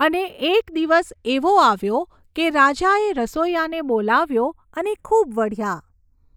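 Across the whole speech recording the channels are drifting apart: two clocks differing by roughly 40 ppm slide the inter-channel delay up to a fraction of a millisecond. In mono this gives slow flanging, with comb notches creeping down through the spectrogram.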